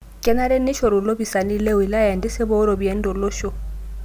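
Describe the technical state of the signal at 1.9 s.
At 1.9 s the speech signal is intact, with no audible fault at that point.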